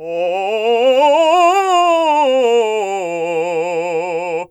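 No technical faults are audible.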